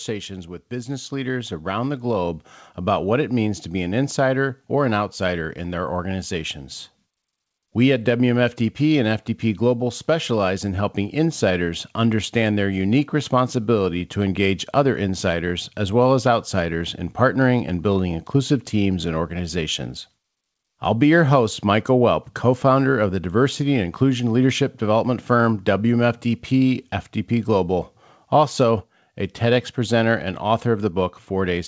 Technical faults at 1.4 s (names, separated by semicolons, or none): automatic gain rising